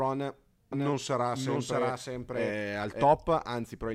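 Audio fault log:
0.72–3.04 s, doubled audio track: a second full-band copy of the speech runs roughly 0.7 s behind the original and about 5 dB quieter. It has no decay or room colour and starts and stops abruptly, likely from the same audio being captured again through a slower path.
0.93–1.56 s, drift correction step: the speed drops by 5.36% and the pitch falls 95.4 cents, close to a semitone flat, then snaps back. This is likely clock-matching software changing the playback rate in one step to refill its buffer.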